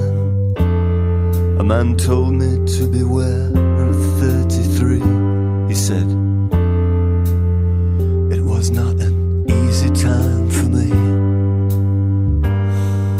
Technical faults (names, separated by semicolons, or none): none